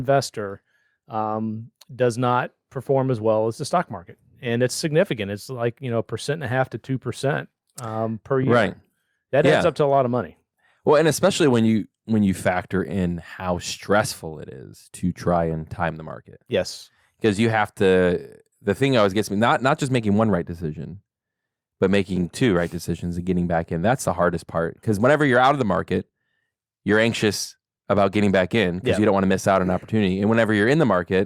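A speech recording, and there's nothing technically wrong to point to anywhere in it.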